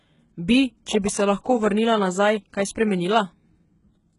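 Throughout the speech, the treble sounds synthetic and s sounds turn gritty and metallic, with nothing above 11.1 kHz, likely HE-AAC compression rebuilding highs from lower bands at a very low bitrate.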